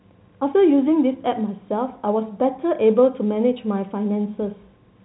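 The speech has no technical faults and carries the narrow band of G.711 telephone coding, with nothing above 3.9 kHz.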